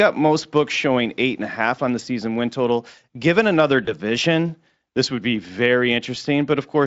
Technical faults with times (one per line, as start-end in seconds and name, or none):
0.00-0.06 hard clipping
3.85-3.94 VoIP packet loss concealed by the speech codec